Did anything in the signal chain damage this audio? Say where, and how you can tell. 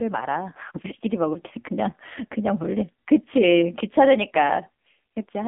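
Yes, at the codec stage: the AMR narrowband mobile codec, throughout. Nothing passes above 3.8 kHz, and the heavy buzzy, synthetic texture of the pulse-driven vocal-tract model points to about 6.7 kbps.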